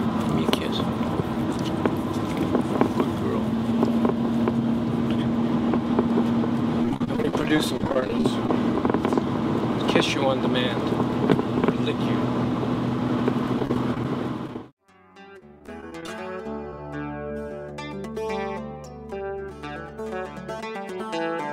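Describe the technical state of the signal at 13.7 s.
At 13.7 s you're inside a burst of repeated packet loss, 13.59 to 14.05 s. Short holes, up to 20 ms each, get patched by stretching the previous sound, so it comes out choppy and robotic.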